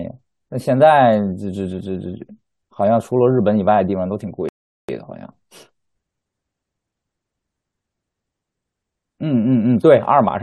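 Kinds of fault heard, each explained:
Rebuffering stall: the player drained its downloaded audio and had to wait for more, so at 4.49 s the speech drops to silence and picks up exactly where it left off at 4.89 s. Nothing's skipped, but about 0.4 s of dead air gets added.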